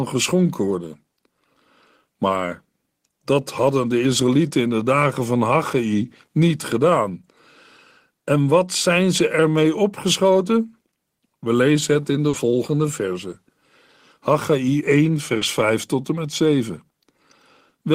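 At 12.29 to 12.35 s and again at 15.37 to 15.43 s the speech briefly smears and wobbles. This is short concealed packet loss: about 40 ms of audio arrived too late, and the receiver filled each gap by extending the preceding sound before blending back.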